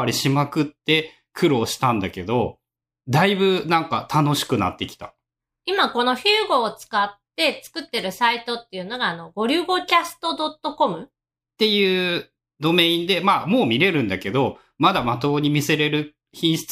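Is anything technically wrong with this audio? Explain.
No technical faults are audible.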